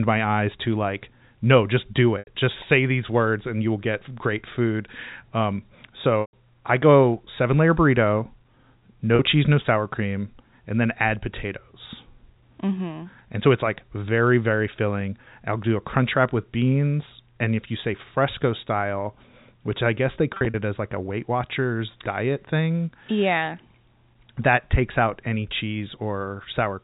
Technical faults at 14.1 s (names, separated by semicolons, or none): none